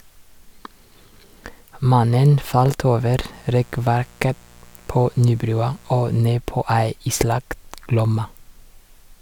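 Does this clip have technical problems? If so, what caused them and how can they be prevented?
Yes. Switching spikes leaked into the signal twice per 60 Hz mains cycle, adding a raspy mains buzz well below the speech from 3.30 to 6.20 s, just after "falt over". Keep dimmers and rectifier-based supplies off the audio circuit, and use shielded, properly grounded cables.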